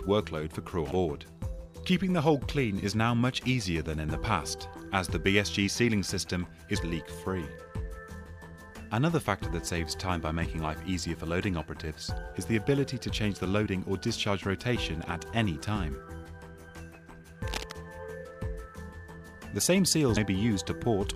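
At 7.02 s and again at 12.24 s there is a low thump, with the sound carrying on unchanged underneath. Each is a DC step: the waveform's zero line suddenly jumps to a new offset, which then drains away through what behaves like a 20 Hz high-pass, giving that brief, dull knock.

From 17.47 to 17.72 s a dense, uneven scratching rustle sits over the audio, at roughly 10 dB below it. This is cable scratch noise, likely from a worn cable, connector or control being moved so its contact resistance flickered rapidly.

At 20.16 s the audio jumps forward by about 70 ms. Compressed frames were skipped there, which fits roughly three 26.1 ms frames going unplayed.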